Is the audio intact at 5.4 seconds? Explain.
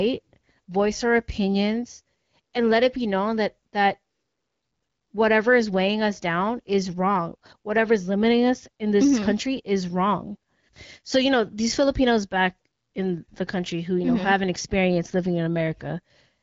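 Yes, at 5.4 seconds the speech is intact, carried cleanly through the AMR wideband (HD Voice) codec at 12.65 kbit/s with no fault at that moment.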